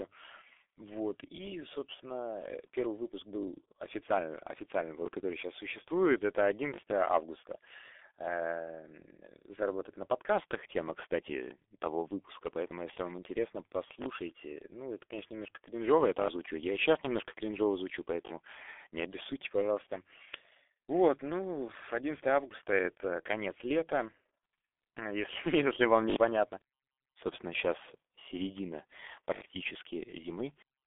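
It's speech squeezed through a G.723.1 codec the whole way, heavily damaged: the line is band-limited to roughly 300 Hz to 3.5 kHz with nothing above 3.7 kHz, so it's muffled and hoarse with smeared consonants, the kind of result you'd expect at around 6 kbit/s. On top of that there are repeated buffers, where a 20 ms chunk replays with hard joins and gives short stutters or buzzy clicks. They land at 5.06 s (right after "официально официально", before "который сейчас существует это"), 6.74, 14.02, 16.2, 18.26 (after "сейчас немножко кринжово звучу"), 26.1 (after "если если вам") and 29.34 s. The ones at 16.2 and 29.34 s are the longest, each chunk repeating four extra times.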